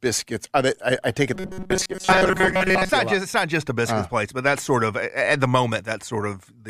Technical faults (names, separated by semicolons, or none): robotic sound from repeated short buffers